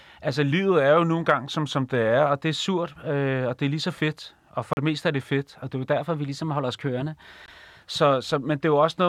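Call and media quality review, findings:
Drift correction step, 0.51 to 2.26 s: speech slows about 6.3% and drops roughly 112 cents, a bit over a semitone, then snaps back right before "og det er surt". Likely a clock-sync resampler stepping its rate to rebalance its buffer.

Drift correction step, 5.98 to 7.80 s, starting after "og det er jo": the mirror image, about 6.3% fast and roughly 106 cents sharp, then back to normal. Likely the same resampler correcting the other way.

Bluetooth dropout, 4.73 to 4.77 s: a 37 ms silence between "så fedt og for" and "det meste er det". Speech picks up further along, as if it kept playing. Likely late packets dropped on the wireless link, which fits two packets.

Bluetooth dropout at 7.46 s: a shorter gap of about 19 ms, inside the sped-up stretch, with the same later resume. Likely one missed packet on the headphone link.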